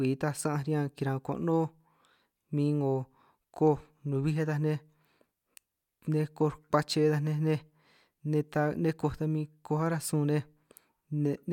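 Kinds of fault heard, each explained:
No faults detected in the speech.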